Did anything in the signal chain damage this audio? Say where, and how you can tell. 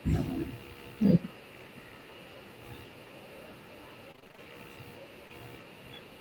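Yes. From 4.11 to 4.40 s the speech turns choppy and robotic, with a run of short holes, none longer than about 25 ms, patched over about half the span. This is repeated packet loss on the network: each missing packet is concealed by stretching the previous sound.

At 5.28 to 5.31 s there is a brief smear where roughly 20 ms of audio never arrived. This is a short concealed packet loss, also a network fault: the decoder filled the gap by extending the preceding sound, then crossfaded back into the real signal.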